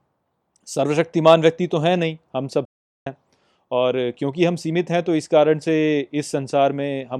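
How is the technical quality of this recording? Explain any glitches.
There's one real glitch in this speech recording, a playback stall. At 2.65 s the audio just drops out and stays silent until about 3.07 s, so roughly 410 ms of nothing, then it carries on. The likely cause is the player starving for data, or its audio thread getting blocked, so nothing reached the output until it caught up. It sounds like the speech freezing mid-flow for a beat rather than a click or crackle.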